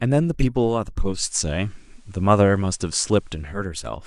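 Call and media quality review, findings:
Hiss rises and level shifts about 3 dB, 0.98 to 3.70 s; hiss roughly 40 dB down. Digital radio blending to analogue: receiver lost the digital stream, cross-faded over 426 ms to FM, then back.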